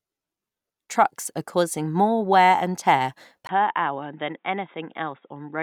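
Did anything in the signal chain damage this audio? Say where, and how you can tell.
Yes, at the device or driver stage: the input was likely switched to a poorer device. After "more wear and tear", a 20 ms silence at 3.47 s precedes duller, boxier, slightly quieter sound with a faint new noise floor. A spectrogram shows everything above 3.8 kHz vanishing there.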